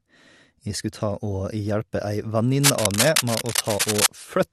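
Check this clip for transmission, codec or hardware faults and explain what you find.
One hardware fault is present.

Cable scratch noise runs from 2.62 to 4.09 s. It is likely caused by a worn cable or connector moving, its contact resistance changing rapidly. Dense, uneven bursts of scratching noise sit over the speech at roughly the speech's own level.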